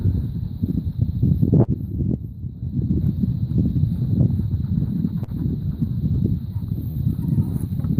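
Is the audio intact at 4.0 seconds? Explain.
Yes, at 4.0 seconds the audio plays through cleanly, with no dropout, click, distortion or other fault.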